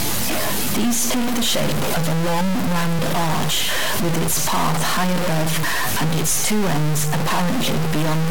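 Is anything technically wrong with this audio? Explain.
Yes. A stuck bit runs through the whole speech clip: a harsh, buzzy distortion rides on every phrase, and the pauses fill with steady noise instead of going quiet. The cause is likely one data bit held at a fixed value, so about half the samples jump by a fixed step, here roughly -15 dBFS, a fairly high bit. Unlike clipping, the grit doesn't fade on quieter passages, and the silences themselves hiss.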